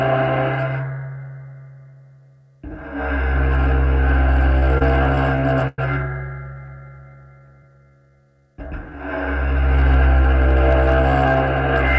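Repeated stalls (stutter) run from 4.59 to 5.79 s: packets reached the receiver late or more slowly than playback consumed them, so the jitter buffer emptied eight times. At each gap the receiver stretched out the last sound until data resumed, fading it during the longest wait of about 104 ms. Nothing drops out, but concealment fills roughly a fifth of that stretch with about 231 ms of extended sound, which makes the audio hitch and drag.

Jitter buffer slow-down follows at 6.53 to 8.97 s, and again at 9.46 to 9.82 s. With its reserve running low or its target delay just raised, the receiver built up a reserve by repeating single pitch periods and fragments of quieter moments many times over, inserting about 249 ms and then about 88 ms. Playback runs at 90% and then 79% speed with unchanged pitch, so sounds are drawn out, more heavily in the shorter second stretch. The band stops at 8 kHz, which fits G.722 at 64 kbps on the call path.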